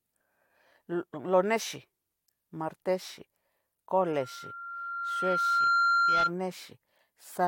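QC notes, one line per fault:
4.01–6.33 s: loudspeaker feedback squeal. A 1.4 kHz tone swells over about a second and a half to about 5 dB above the speech. The microphone is picking up its own loudspeaker.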